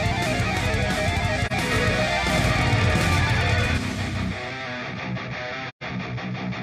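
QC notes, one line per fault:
1.46 to 1.52 s and 5.68 to 5.83 s, AAC frame loss with muting: the sound thins into a brief soft-edged silence, first about 43 ms long, then about 128 ms. The decoder zeroed the spectrum of missing frames, and the overlapping transform windows fade the level down and back up. The lengths fit one lost frame and then a run of three.
1.72 to 3.78 s, doubled audio track: a second full-band copy of the sound trails the original by about a tenth of a second at roughly equal loudness, producing a dry slapback with no decay or room colour. It appears and vanishes abruptly at both ends. This is likely the same signal captured again through a slower path and summed with the direct one.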